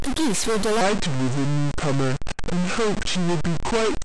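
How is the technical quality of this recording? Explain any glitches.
The technical quality is poor: two faults run through most or all of the recording.

A stuck bit is present from start to finish. The speech carries added distortion, and the pauses are filled with noise instead of silence. The likely cause is one data bit held at a fixed value, so many samples are offset by that bit's weight. On a waveform, the gaps show a constant jagged floor. A spectrogram shows broadband haze across all frequencies.

A section at the wrong speed begins at 0.81 s and runs to the end. Playback there is at 0.746 times the original speed, so the speech becomes slow and deep, about five semitones lower. This is likely from the audio being played against the wrong clock. A spectrogram shows harmonics and formants shifted downward and stretched in time, and on the waveform the syllables look elongated.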